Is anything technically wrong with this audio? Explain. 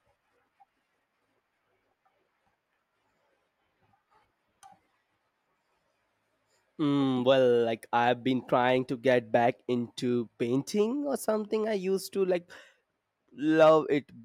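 No, nothing technically wrong can be heard here.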